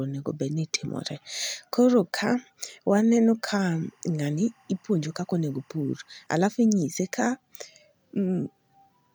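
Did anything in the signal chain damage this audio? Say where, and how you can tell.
Yes. Timecode bleed in the analogue wiring: from 3.48 to 6.27 s, before "alafu inyise ka", a faint chirping warble sits about 40 dB down, flipping between roughly 1 and 2 kHz, which fits leaked 24-frame code. Unlike steady whine, it alternates pitches.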